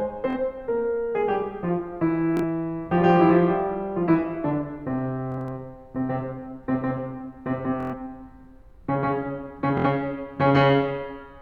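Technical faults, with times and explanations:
0.30–0.37 s, 2.37–2.43 s, 5.32–5.52 s, 7.80–7.94 s and 9.78–9.87 s: Bluetooth stutter. The music catches and buzzes briefly at each point. Packets arrived late or not at all, so the receiver replayed its last short slice until fresh data came. The gaps run from about 46 ms to 116 ms. At 5.32 s the losses are scattered over about 186 ms. When playback resumes, it jumps ahead as though it had kept playing.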